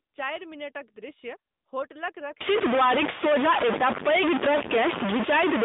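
This is a speech clip, and it has passed through the AMR narrowband mobile codec throughout. The line band runs from about 200 Hz to 3.7 kHz, and nothing passes above 3.8 kHz. The codec damage is plainly audible, with a buzzy, synthetic edge that fits a rate near 10.2 kbps. From 2.41 s, just after "चारि मिनटक दृश्य होटलक", a distortion begins and lasts to the end. Pauses fill with noise. This is likely a stuck bit, one data bit held at a fixed value that corrupts the waveform.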